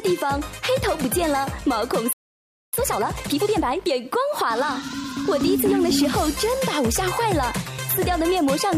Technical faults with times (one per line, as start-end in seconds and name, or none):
2.13-2.73 playback stall
2.73-3.93 time-compressed catch-up